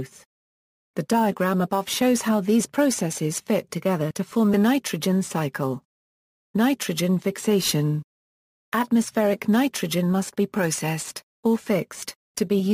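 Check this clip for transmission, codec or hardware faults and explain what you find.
No transmission, codec or hardware fault can be heard anywhere in the clip; the signal stays continuous and stable throughout.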